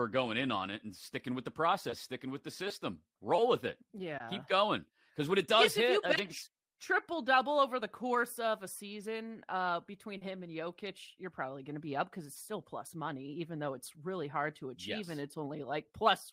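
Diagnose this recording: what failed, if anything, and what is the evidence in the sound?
Network: short concealed packet loss. At 10.17–10.23 s, after "a season uh between", 40 ms never arrived and was synthesised from preceding speech, smearing briefly.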